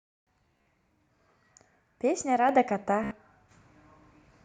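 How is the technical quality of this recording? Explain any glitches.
The recording has two kinds of glitch, each occurring twice: a repeating buzz-like stutter and sudden upward jumps in level.

Bluetooth stutter, from 0.46 to 0.66 s and again from 3.04 to 3.11 s: short slices of sound repeat in a rapid machine-gun buzz, then the audio jumps ahead. In the first burst, about 116 ms of audio goes missing, spread over roughly 200 ms, with the longest gap about 44 ms. The second burst loses about 73 ms. When wireless packets were lost or arrived late, the receiver replayed its last buffer until fresh data arrived.

Microphone volume stepped up at 2.49 s and again at 3.51 s: speech and background noise both get louder together in a single step, each time by about 5 dB. The call software judged the microphone too quiet and raised the device's input volume abruptly rather than fading it up.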